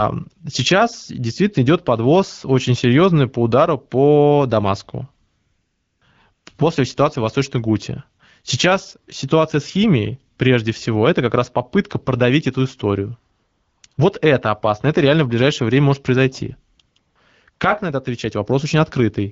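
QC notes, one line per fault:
5.27–17.59 s, AMR comfort noise: nine drop-outs of 40 to 740 ms, in clusters at 5.27–6.45 s (the longest ends just before "после ситуации в"), 13.35–13.97 s and 16.75–17.59 s (after "ближайшее время может произойти", up to "на это"). Speech frames stopped, so smooth synthetic noise replaces the real background, switching in and out.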